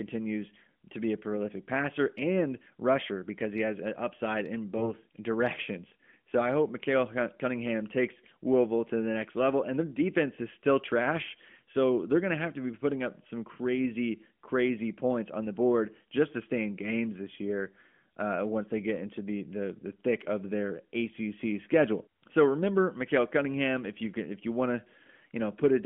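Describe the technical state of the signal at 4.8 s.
At 4.8 s there is a lost AMR speech frame, with its effect heard from 4.78 to 4.91 s. One 20 ms frame failed its checksum, so the decoder repeated the previous pitch and vocal-tract settings at reduced gain. This produces a short dip or warble rather than a hard silent gap or click, and the speech returns weak for a moment. The narrowband AMR line around it, at 12.2 kbps, passes roughly 200 to 3400 Hz.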